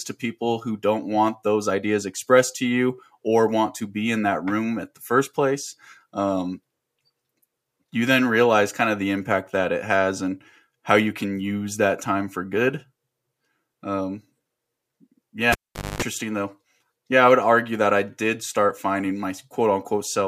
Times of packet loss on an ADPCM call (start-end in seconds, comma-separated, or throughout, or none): none